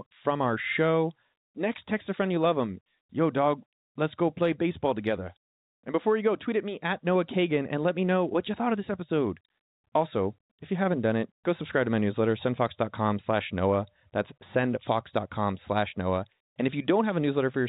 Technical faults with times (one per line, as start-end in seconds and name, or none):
none